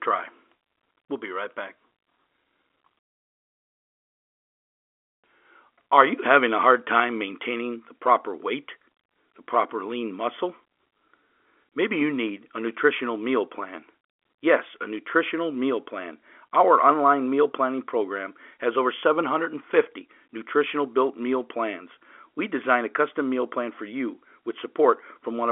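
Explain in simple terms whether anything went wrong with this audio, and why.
Nothing went wrong here.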